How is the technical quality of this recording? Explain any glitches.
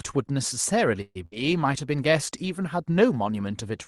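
Two glitches in quick succession in this speech, both around the one-second mark, on what sounds like an Opus call path with the top end stopping near 12 kHz.

Call audio freeze, 1.01 to 1.17 s: the last sound stretches into a fading buzz or hiss, then about 40 ms of silence, likely packets stalling until the jitter buffer emptied. Nothing's lost, just delayed.

Burst of packet loss, 1.25 to 1.34 s: another short fill where the last sound is held and turned down, but this time roughly 60 ms of the speech is gone when it picks back up.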